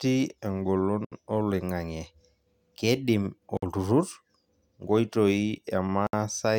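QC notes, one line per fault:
1.05–1.12 s, 3.57–3.62 s, 6.07–6.13 s: gap at a join of encoded pieces. Separately encoded speech segments were butted together untrimmed, so encoder start delay and end padding insert silences of 68, 54 and 62 ms. Unlike a dropout, nothing is lost: speech resumes exactly where it stopped, with smeared edges.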